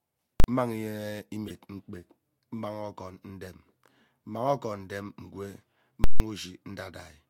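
At 0.40 s the speech is hit by invalid numbers at full scale. A calculation produced infinite or invalid values, and the output was pinned at one extreme value for a 40 ms block. With a block that short, the jumps onto and off the rail merge into a single hard bang. At 6.04 s the same fault returns for 160 ms, to 6.2 s. This block is long enough to split apart: a loud pop at 6.04 s, dead flat silence, then a second pop at 6.2 s.

Between them, from 1.48 to 1.51 s, a corrupt frame is decoded. Flipped bits in compressed data were played anyway, so misread codes put energy at wrong frequencies across a couple of frames. The result is a brief chirp, squeak, blip or burst of noise rather than a bang. It peaks at about -25 dBFS, far below full scale, and it has scrambled content instead of a flat pinned level bounded by clicks.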